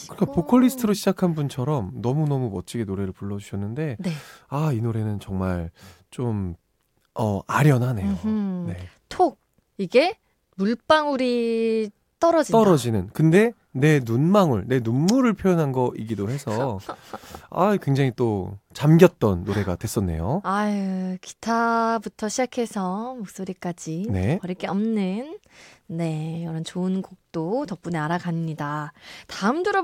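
Nothing in this speech recording stands out as a technical problem at any point, so there's nothing here to flag.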